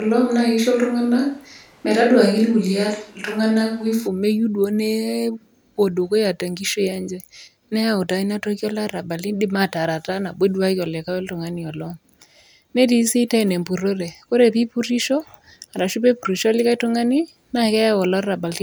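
A switch to a distant microphone is already under way when the speech begins and lasts until 4.06 s, where the close, fuller sound returns abruptly. During that stretch the speech sounds roomy and hollow, thinner in the bass, with background noise sitting roughly 35 dB below it, while the overall level stays about the same. The likely cause is that the close microphone's signal was lost, leaving a more distant pickup.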